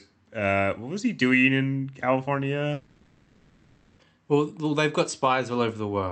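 From 2.73 to 4.01 s the speech dissolves into a fading buzz with no silence, likely a long network dropout, far longer than a brief packet-loss blip.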